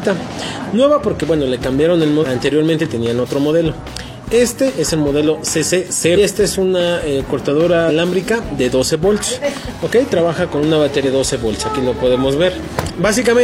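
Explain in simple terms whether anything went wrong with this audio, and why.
Brief glitches interrupt the sound at 2.19, 6.13, 7.85 and 11.01 seconds. That is damaged data in a compressed stream: corrupted bytes make the decoder misread frames and briefly lose its place.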